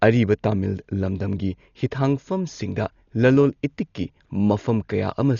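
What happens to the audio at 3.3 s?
At 3.3 s the speech sounds dull and band-limited, with nothing above about 6.9 kHz, and a rough, fluttering noise hangs around the tonal parts. That's there for the whole clip, not just this moment. It's likely heavy Dolby Digital compression at a starved bitrate, which fits something around 40 kbps. The encoder narrows the band and leaves many frequency lines with no mantissa bits, so the decoder fills those gaps with dither noise.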